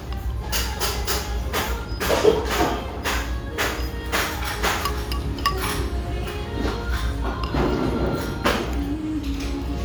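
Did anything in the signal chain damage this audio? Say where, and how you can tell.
No, nothing in this recording of sounds points to damage anywhere in the signal chain, so there's no stage to blame here.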